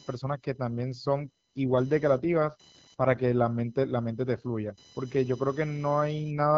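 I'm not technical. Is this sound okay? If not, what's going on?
No. Computer activity noise runs through the whole clip as a faint, high buzz, picked up because the computer's working parts disturb the audio circuit's shared electrical ground.

AMR rate drop from 1.2 to 3.34 s, and again from 6.21 s to the end: the phone network briefly lowered the HD Voice call's data rate, so the voice sounds rougher and more synthetic.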